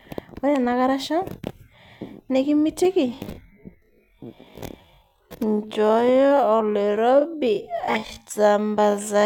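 At 3.05 s the speech abruptly drops to roughly half pace, about 0.53 times normal speed, and stays there to the end, yet the pitch doesn't budge. That's a time-stretched section, likely software padding the audio out by repeating short slices.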